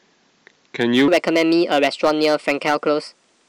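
From 1.08 s to the end, a section at the wrong speed plays 1.32 times fast, likely a clock mismatch, raising speech about five semitones; spectrogram harmonics jump upward, waveform compresses.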